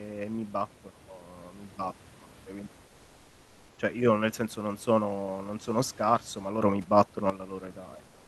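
From 0.88 to 1.04 s, just before "mi battono cioè quindi", the level drops about 9 dB at once. Sound and background fall together. This sudden gain jump is likely a gain setting applied without a ramp.

From 2.87 to 3.77 s, after "mi battono cioè quindi", the real background gives way to comfort noise. It is steady and featureless, about 1 dB quieter. The sender likely stopped transmitting in the pause, as Opus DTX does.

From 6.62 to 7.30 s, after "non sono scarso ma", another sudden gain jump lifts everything about 11 dB. It is likely an unramped gain change again.

From 8.07 s to the end, comfort noise again replaces the background, about 1 dB lower. This is likely the same discontinuous transmission.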